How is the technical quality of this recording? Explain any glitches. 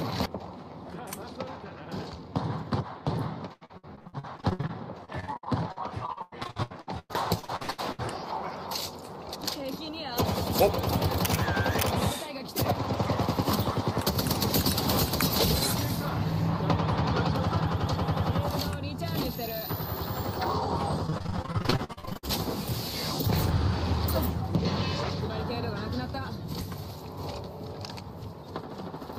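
The recording is marred by two bursts of repeated packet loss (robotic sound), from 3.53 to 8.15 s and from 21.07 to 22.25 s. In both stretches, data arrived late or not at all over and over, and the receiver patched each hole by extending the last sound it had. Dozens of brief dropouts follow one another, the longest about 103 ms in the first burst and 56 ms in the second. Roughly a third of the first stretch and nearly half of the second is filled-in sound. The result is choppy, with fragments of the audio missing.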